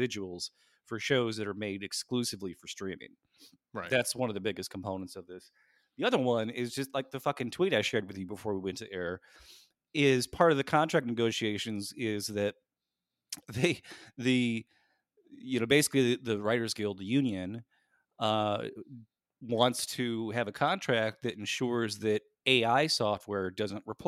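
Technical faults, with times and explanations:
No technical faults were detected anywhere in this speech recording.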